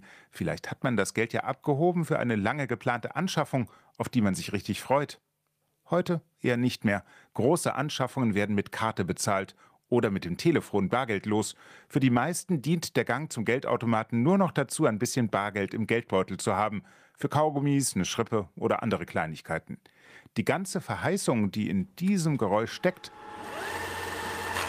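Nothing in this one calls for comment: no glitches, dropouts or other technical faults turn up anywhere along the way.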